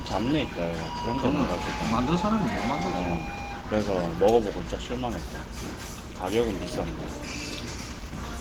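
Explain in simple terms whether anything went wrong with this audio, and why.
Something went wrong in how the audio was stored: it was most likely squeezed hard by Opus compression, with the encoder running in its mixed speech-and-music mode to save space. That mode simplifies fine detail, so from start to finish the sound comes across as grainy, rough and hoarse, with a muffled quality to its textures. The damage is plainly audible throughout, even though the very highest frequencies are still present.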